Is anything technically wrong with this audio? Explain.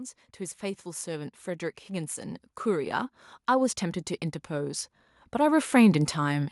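Yes. From 0.59 to 3.84 s, and again from 4.47 to 6.47 s, the automatic gain is rising. The gain control judged the input too quiet and pushed its level up. It rises by about 8 dB, then about 7 dB. The speech and the background swell together.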